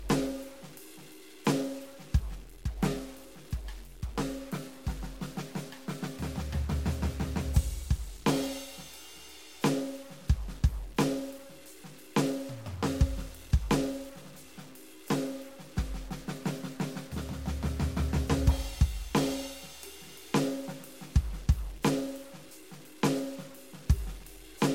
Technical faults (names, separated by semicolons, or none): stuck bit